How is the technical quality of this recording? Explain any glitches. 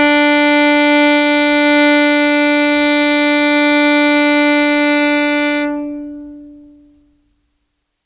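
The technical quality of this music recording is sound, with no glitches to explain.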